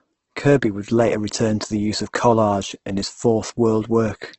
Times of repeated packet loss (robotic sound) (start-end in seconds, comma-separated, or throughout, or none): none